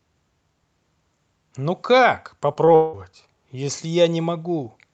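At 2.53 s and again at 2.65 s there is short concealed packet loss. Each time about 20 ms of the call reached the decoder too late, so the receiver stretched the preceding sound across the gap and blended back into the real audio. Each gap is heard as a brief smear or wobble.

From 2.75 to 2.95 s comes what is likely a long network dropout. No audio arrived for about 0.2 s, and the receiver carried the last sound forward as a fading buzz or hiss across nearly the whole gap. When the audio resumes, that stretch is missing.

Throughout, the call codec's band limit cuts off sound above about 8 kHz.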